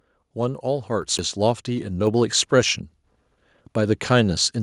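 At 1.18 s there's a CD skip: the laser jumped tracks, so the speech mutes for about 10 ms, then picks up from a different spot.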